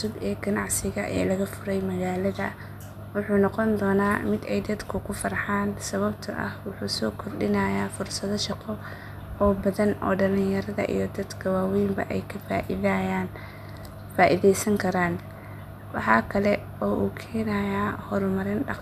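No technical faults can be heard anywhere in the recording. The speech runs without any audible problem at any point.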